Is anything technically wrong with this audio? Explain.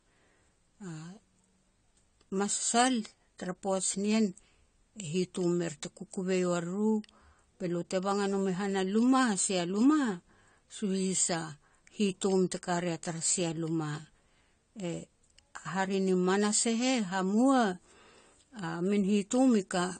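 Yes. AAC compression dulls the whole speech clip. Nothing sounds above 9 kHz, and sibilants turn fizzy and smeared. A likely low-bitrate encode, near 32 kbps, discarded the high bands.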